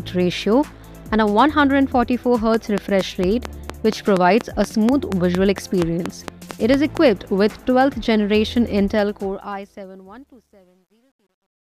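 From 2.54 to 6.98 s, a steady ticking of about twenty sharp clicks runs at 4.3 per second, roughly 15 dB above the sound: a train of clicks, likely from interference by nearby equipment or a faulty connection or power supply. From 8.9 s the smooth fade-out toward 11.8 s turns gritty, and is at its worst between 10.04 and 11.8 s. This is truncation distortion on a fade, with the sound suggesting an undithered stage that keeps only about 11 bits.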